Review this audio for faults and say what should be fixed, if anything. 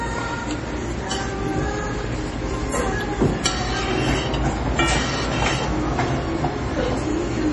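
Heavy MP3 compression, likely at a starved bitrate near 32 kbps, throughout: everything above 11.3 kHz is gone, and weak detail flickers, sounding watery with smeared attacks. Encode at a higher bitrate or use a lossless format.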